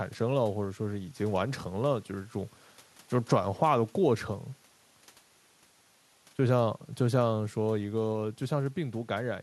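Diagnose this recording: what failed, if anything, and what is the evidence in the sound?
Nothing stood out on listening to this speech recording, and no stage in the chain shows anything that needs diagnosing.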